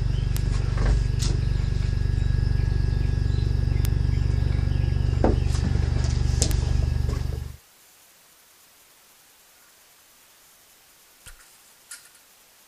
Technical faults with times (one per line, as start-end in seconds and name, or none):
0.37 bit error spike
3.85 bit error spike
6.51 bit error spike